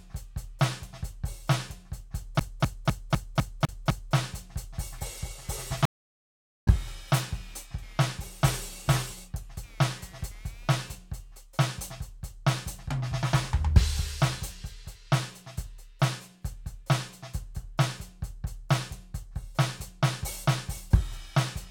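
From 2.39 to 4.15 s, a CD stuck on one turn throws the laser back each rotation, so the same 0.25 s of music repeats seven times, each jump briefly muted. From 4.98 to 11.44 s, computer activity noise shifts the shared audio ground, adding a buzz pulsing around 200 Hz, roughly 25 dB below the music. From 5.85 to 6.68 s, a stream reconnect drops the connection for about 0.82 s of silence, and the music resumes about half a second later.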